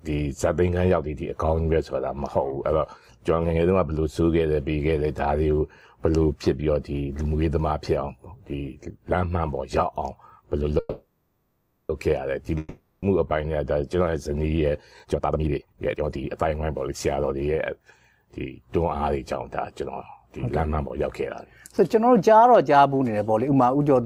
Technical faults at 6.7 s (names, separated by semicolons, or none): none